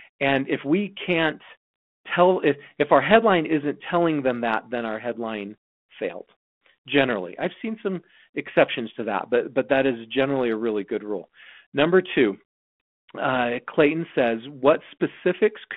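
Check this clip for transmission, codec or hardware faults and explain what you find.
I find no transmission, codec or hardware faults in this clip.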